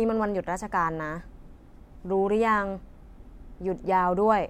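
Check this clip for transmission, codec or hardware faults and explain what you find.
No faults found in the speech; nothing here needs flagging.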